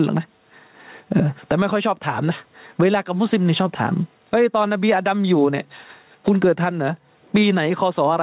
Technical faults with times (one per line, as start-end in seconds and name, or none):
0.00-8.23 gain pumping